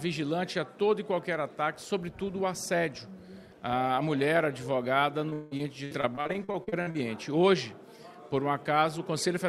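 From 5.29 to 6.96 s, repeated packet loss makes the audio choppy. Around fifteen holes, the longest 178 ms, are each patched by stretching the last sound, so about a third of the stretch is filler. Unlike a single dropout, the breaks keep recurring.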